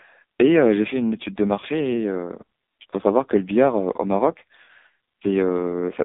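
Right through, it's the AMR narrowband mobile codec, squeezed hard. Nothing passes above 3.7 kHz, and the speech sounds buzzy and synthetic, which fits roughly 5.9 kbps. Then come lost AMR speech frames. At 1.60 s there's a 20 ms dip, and at 4.64 to 4.71 s a 40 ms drawn-out warble, fitting two lost frames. Each time the decoder patches over the gap by reusing the last good settings at falling gain.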